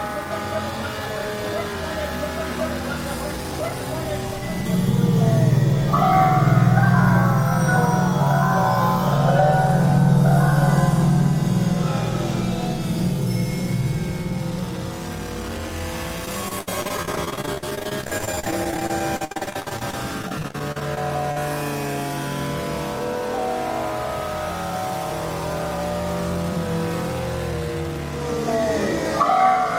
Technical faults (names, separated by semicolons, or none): repeated packet loss (robotic sound)